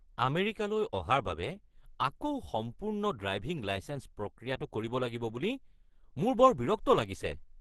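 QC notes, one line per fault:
Throughout, Opus compression: the speech sounds muffled and hoarse, with a rough, grainy edge, likely from the encoder running in its hybrid speech mode at a low rate, which fits about 16 kbps, with the upper band filled coarsely rather than kept.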